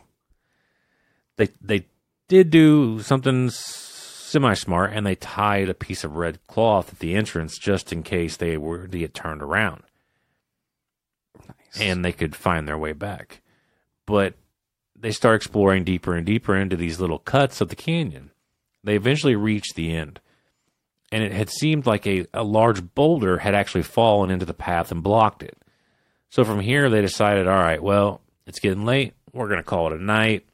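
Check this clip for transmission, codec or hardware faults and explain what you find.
One codec fault is audible in this speech clip.

Pre-echo at 9.14 s: a short hiss leads a sharp attack by about 11 ms, roughly 16 dB above the quiet just before it. The transform codec spread the quantisation noise for that block across its whole length, so noise sized for the loud onset fills the silent moment ahead of it. The smear points to a window of about 26 ms, with no switch to short blocks, leaving the attack blurred.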